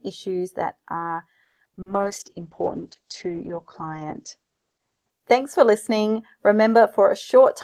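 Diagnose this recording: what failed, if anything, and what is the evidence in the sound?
Choppy, robotic speech from 1.43 to 2.02 s, with six gaps: repeated packet loss at the network stage, concealment stretching audio over about 260 ms and losing about 140 ms.

Rough, muffled speech from 1.92 to 5.18 s: a call bitrate drop from 40 to 9 kbps made the codec cut bandwidth from 20 kHz to 8 kHz.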